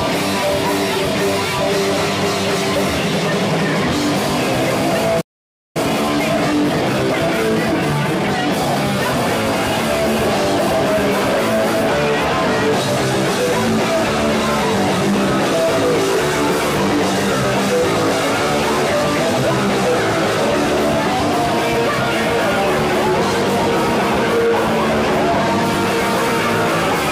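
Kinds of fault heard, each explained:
Playback stall: The sound cuts out in mid-flow at 5.21 s and stays silent for a little over half a second, about 540 ms, before resuming at 5.77 s. The gap is clean silence, so the output simply stopped being fed. The likely cause is that the player ran short of buffered data or its output thread was held up, leaving nothing to send to the device until it recovered.
Time-compressed catch-up: Straight after the gap, from 5.77 s to 8.77 s, the audio runs hurried, at about 1.15 times normal speed, yet its pitch stays where it should be. That pairing shows the player shrinking the backlog built up during the stall by snipping out short fragments and cross-fading across the joins, rather than speeding up playback like a faster tape. Once the three seconds of catch-up end, normal pacing returns.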